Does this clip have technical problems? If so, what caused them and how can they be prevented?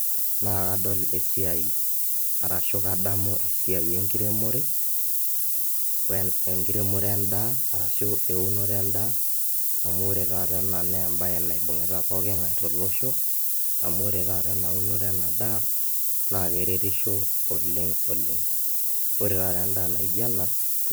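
Yes. For the whole clip, a steady, thin, bright hiss sits under the speech, thickest at the top of the band. This is low bit depth with noise shaping: the speech was reduced to about 3 bits, and the large rounding error was fed back so it moved up into high frequencies. It can be prevented by keeping at least 16 bits through recording and processing, and requantizing only once at the final export.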